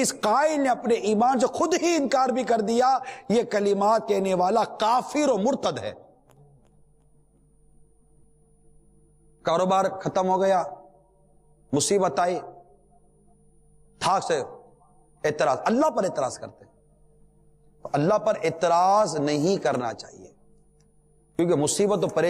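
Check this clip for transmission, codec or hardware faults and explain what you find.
One fault runs through the whole clip. A steady ticking at 20 per second sits under the sound wherever there is signal. It comes from a resampler restarted on every block: each 50 ms block was converted from 48 kHz to 44.1 kHz in isolation, leaving an error at every edge.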